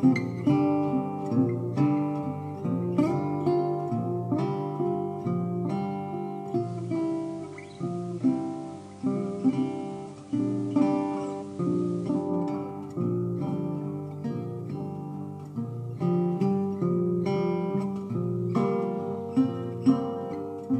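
From 6.51 s to 12.35 s the receiver lost its digital stream and fell back to FM, a digital radio blend to analogue. After a 177 ms cross-fade the level drops about 3 dB and hiss rises to roughly 30 dB below the signal.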